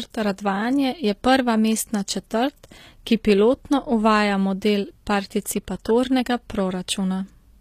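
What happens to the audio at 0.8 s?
At 0.8 s the speech carries the same damage heard across the whole clip. The treble sounds synthetic. S sounds turn gritty and lispy, and nothing is left above 14.9 kHz. The likely cause is HE-AAC compression at a low bitrate, around 24 kbps by the sound of it. The codec keeps only the lower spectrum and fakes the top by copying lower bands upward. Their harmonics no longer line up, which gives the metallic edge.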